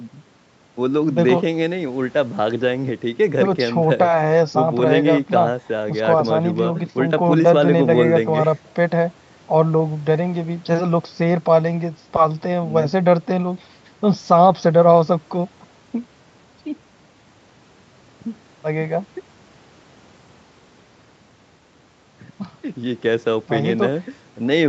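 No technical faults can be heard in this speech, which carries the ordinary traits of a call chain: the lowest bass is trimmed by the microphone processing, and the frequency content stops at 8 kHz, which fits an Opus call link running at that bandwidth.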